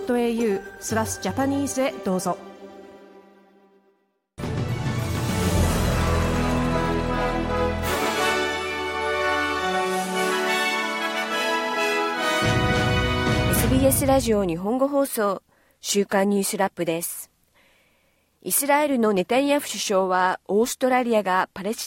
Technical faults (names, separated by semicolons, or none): none